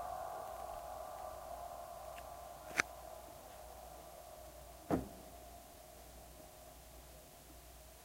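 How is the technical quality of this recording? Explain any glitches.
One glitch stands out: a brief jumbled moment near the middle of the recording.

From 4.2 to 4.36 s, chunks out of order: a 40 ms chunk arrived three chunks late and plays after material that should follow it. Nothing is missing, but the scrambled sequence sounds garbled. A waveform or spectrogram shows three hard joins where the envelope and spectral content jump discontinuously.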